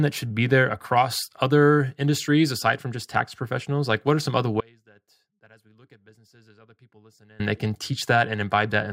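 The signal path likely lost its wanted input for about 2.8 s while staying live, producing an audio dropout to a faint residue from 4.61 to 7.40 s: after "what are some other", the speech cuts abruptly to a faint leak roughly 30 dB down, returning at "they can".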